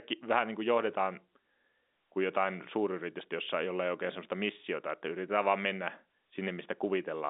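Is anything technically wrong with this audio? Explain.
No, the speech comes across as ordinary telephone-line audio, with the sound confined to roughly 250 Hz to 3.7 kHz and nothing above 3.8 kHz, as expected of G.711 telephone coding, and no technical fault can be heard.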